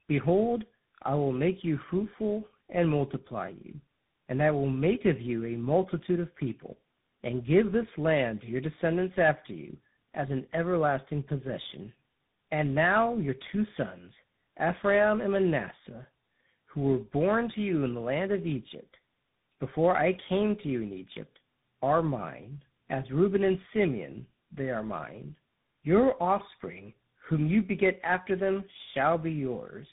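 Throughout the clip the speech sounds rough, noisy, muffled and warbly, with nothing above 3.8 kHz. This is tandem speech coding: the call was decoded and re-encoded by AMR-NB, GSM full rate and then CVSD, each coder working on the previous one's degraded output.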